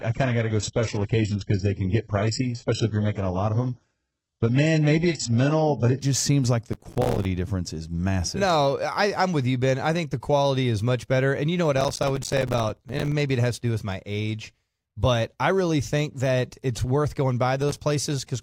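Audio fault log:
0.0 to 6.0 s, adaptive stream starting at a low bitrate: The opening sounds dull and smeared, with nothing above about 8 kHz and stronger codec artefacts. It suggests the player began on a very lean version of the stream, something like 8 kbit/s HE-AAC, to start fast. Once it had sized up the connection it jumped to a much cleaner rendition, which sounds like AAC-LC around 96 kbit/s. That switch happens with no gap, just before "just seems like the".
6.73 to 7.25 s, 11.77 to 13.12 s and 17.62 to 17.77 s, processor overload crackle: Three bursts of gritty tearing ride on the speech. The first falls between "just seems like the" and "difference is massive". The second runs from after "you know what" up to "maybe it has to", and the third is a brief one near the end. The bursts are roughly 40, 50 and 5 tiny hard-edged dropouts, which points to a processor missing its deadlines on buffers only a few milliseconds long. 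Each missed buffer came out as silence, and the crackle stops as soon as the load eases.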